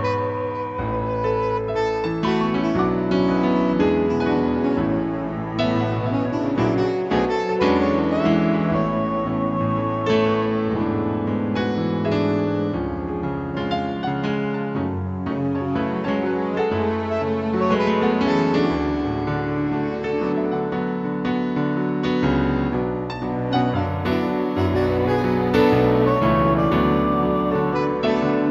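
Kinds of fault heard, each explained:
Imaging from linear upsampling: straight-line interpolation raised the sample rate, dulling the highs and leaving faint mirror images across 8–16 kHz, about 40 dB down, a metallic shimmer.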